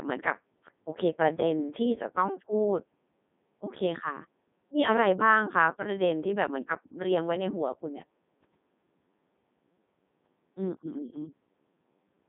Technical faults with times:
0.00-12.28 Codec 2 vocoder

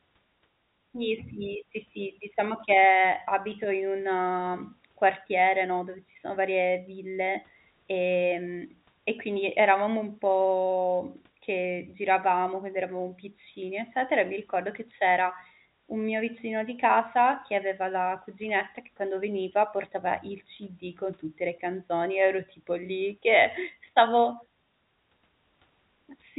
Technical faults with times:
none

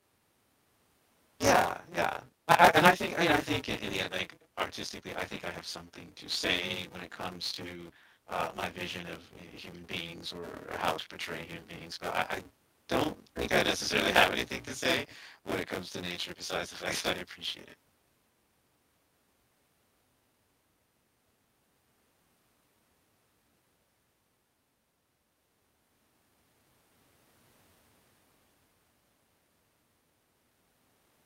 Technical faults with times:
0.00-31.25 buffer tearing

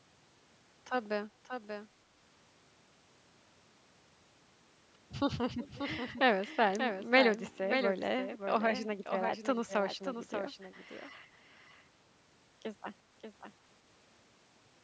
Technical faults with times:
0.00-14.84 doubled audio track
5.60-5.80 echo leak

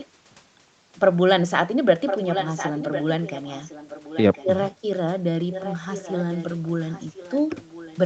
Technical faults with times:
0.00-0.07 echo leak
2.06-4.64 echo leak
5.50-7.98 echo leak

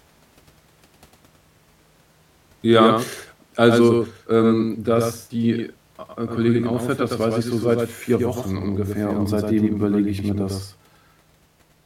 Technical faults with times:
0.00-11.85 doubled audio track

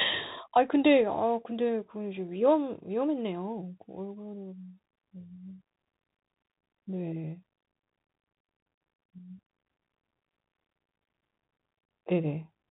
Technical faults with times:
0.00-12.71 Bluetooth CVSD headset codec
0.67 Bluetooth headset packet repeated

